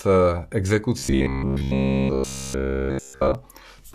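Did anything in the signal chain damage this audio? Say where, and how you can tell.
Yes: robotic sound from repeated short buffers, 0.98–3.35 s, a rigid 66.8 Hz buzz throughout. Likely a starved driver buffer looping 15 ms chunks. The spectrogram shows even 66.8 Hz harmonic stripes.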